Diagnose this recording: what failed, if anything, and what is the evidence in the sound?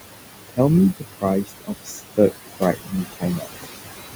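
Call processing failed, with noise suppressor artifacts throughout. Room noise sits about 9 dB under the speech. Suppression lowers it about 19 dB per band.

Speech cut by the noise suppressor occurs from 0.97 to 1.25 s and from 1.44 to 3.47 s. Quiet speech, mistaken for noise, drops up to about 22 dB and sounds swallowed.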